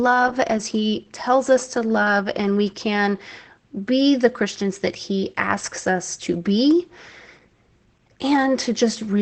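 Opus voice compression runs through the whole speech clip. Nothing is present above 8.4 kHz, and the SILK coder's coarse excitation leaves speech muffled, hoarse and slightly robotic. The plainly audible damage points to a bitrate around 12 kbps in wideband mode.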